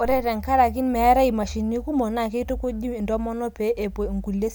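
No technical faults can be heard anywhere in the recording.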